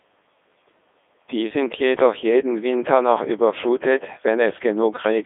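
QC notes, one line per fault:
Throughout: Codec 2 vocoder. The speech comes out robotic and buzzy, squeezed into a phone-like band of about 300 Hz to 3.6 kHz with nothing above 3.8 kHz. The decoder rebuilds the voice from sine waves driven by pitch, voicing, energy and a rough spectral envelope, so the original waveform is gone and the heavy synthetic colouring sits on everything. The quality fits Codec 2's top 3.2 kbit/s mode.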